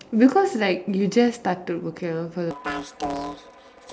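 From 2.51 s to the end at 3.93 s, the speech suffers from planar audio read as interleaved. Each block stores all its left-channel samples followed by all its right-channel samples, but the player treats the data as alternating left-right pairs. The result is that every block is played twice at double speed, once for the left half and once for the right. The blocks here last 8.0 ms, which fits a 128-sample block, and that is too short to produce an audible octave jump. Instead, the speech takes on a robotic buzz at the 125 Hz block rate, while its overall pace stays intact.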